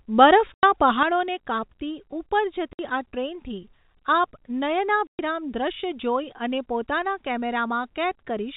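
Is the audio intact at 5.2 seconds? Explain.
No. At 5.2 s the speech is still in a one channel drops out stretch that runs from 1.03 s to the end. From 1.03 s the level falls abruptly by about 6 dB, which is likely one stereo channel going missing before the mono sum, leaving only half of the shared signal. On a waveform the envelope visibly shrinks at 1.03 s, and a spectrogram shows uniformly fainter energy from there on.

The moment also comes just after packet loss filled with silence, from 5.07 to 5.19 s. About 120 ms of audio is missing, which fits four 30 ms packets replaced by silence, with hard edges. The waveform shows a flat line there, and the spectrogram shows a blank vertical gap with a thin broadband line at each edge.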